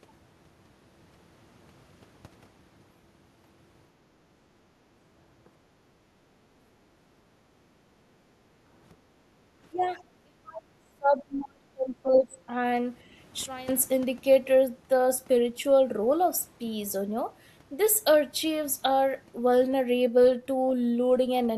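A speech recording in which the room background is gated by the echo canceller from 6.94 to 7.62 s, 7.8 to 7.93 s and 9.14 to 9.35 s, ducking about 9, 9 and 6 dB while the loudspeaker path is active. From 9.7 to 12.37 s the talker's speech is suppressed in double talk, dropping by as much as roughly 30 dB, likely because the canceller cannot separate local speech from loudspeaker echo. At 12.14 to 12.19 s the other side's voice leaks through as a brief scrap around 15 dB below the talker, likely residual echo the canceller failed to remove. A sudden gain jump drops speech and noise together by about 17 dB from 13.46 to 13.69 s, likely a digital gain step applied without a ramp.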